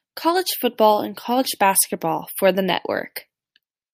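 No faults are audible anywhere in this speech recording, so there is nothing to log against it.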